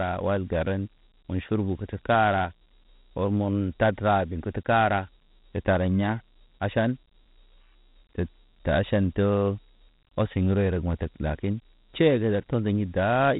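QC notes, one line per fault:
Throughout: Dialogic VOX ADPCM. The band stops near 3.9 kHz, and a gritty hiss rides on the speech, rising and falling with it. This is 4-bit adaptive quantisation, which fits a 32 kbps OKI stream. Unlike steady background noise, the grit follows the speech.
6.65 s: bit error spike. A single sharp tick, broadband and unrelated to the speech around it. It points to one flipped bit in a single sample that jumped by a power of two and came straight back. Unlike a dropout or a burst of clicks, nothing is lost or repeated.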